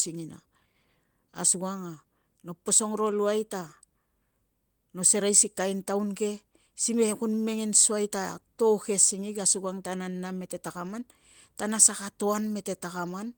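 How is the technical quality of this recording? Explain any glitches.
The recording has a steady timing problem caused by clock drift between sender and receiver, which shows up as repeated timing corrections through almost the whole clip.

Throughout the speech, the sender's clock runs roughly 4 percent faster than the receiver's. The jitter buffer keeps overfilling, so the receiver must keep discarding material.

From 0.13 s to 13.27 s, these repeated timing corrections trim short pieces unevenly, pushing the pace to 105 percent. At most they are heard as faint hiccups and a slightly unsteady, hurried tempo.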